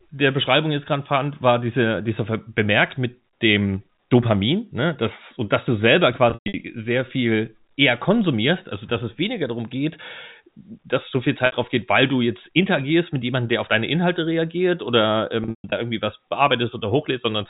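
Packet loss with pitch repetition hits at 6.30–6.54 s, 11.46–11.52 s and 15.44–15.72 s. The gaps get patched by looping the last pitch period, so you hear a brief buzzy hold, and the 120–140 ms runs fade out before the speech cross-fades back in over the band-limited G.711 telephone sound.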